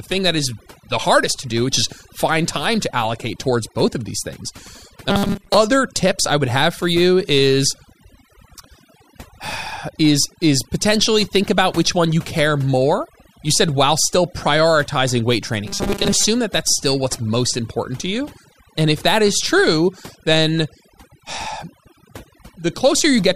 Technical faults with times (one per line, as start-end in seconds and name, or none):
0.00-23.36 overdone noise removal
5.10-5.57 robotic sound from repeated short buffers
15.67-16.25 robotic sound from repeated short buffers